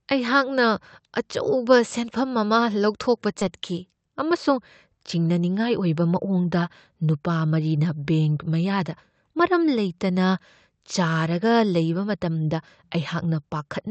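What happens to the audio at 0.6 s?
Nothing goes wrong at 0.6 s: the speech passes through intact, with only the steady band-limited character of the Opus call path, which stops short of the highest frequencies.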